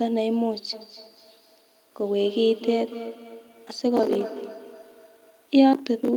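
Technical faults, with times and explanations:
0.73–5.54 s, feedback echo between two devices: the speech returns at a steady interval of roughly 200 ms, thinner and more ringing than the original, peaking about 13 dB below it. A second device in the room replays the signal, and the microphone picks it up again. Its echo canceller removes only its own output, so this return survives. A spectrogram shows fainter, narrower copies trailing each syllable at even spacing, and the waveform shows small delayed repeats after each burst.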